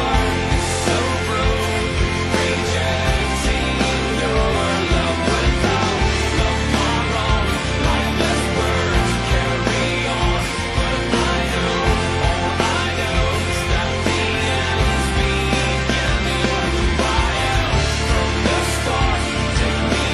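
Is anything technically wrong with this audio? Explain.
No, nothing technically wrong can be heard anywhere in this audio.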